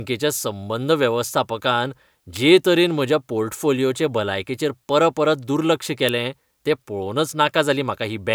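Two sharp snaps sit on top of this speech recording, one at 2.36 s right after "संबंद वेवस्थापकान" and one at 6.09 s after "पोर्टफोलिओचे भलायकेचेर परपरत दुर्लक्ष", each peaking near -10 dBFS. They are electrical switching spikes, likely brief arcs from a nearby switch or motor picked up on the audio line.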